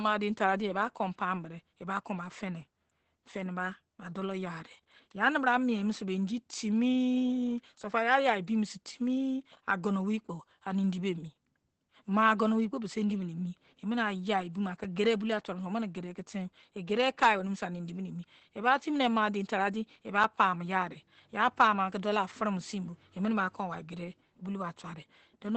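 Throughout the speech, the sound is muffled and hoarse, with nothing above about 8.5 kHz and heavy codec damage. This is likely Opus compression in its SILK speech mode at wideband, which fits a low bitrate of around 12 kbps.

At 14.84 s a 5 ms block of digital silence appears: the samples drop abruptly to zero and return with no fade, most plausibly from an output buffer not filled in time. The hard edges produce a brief tick.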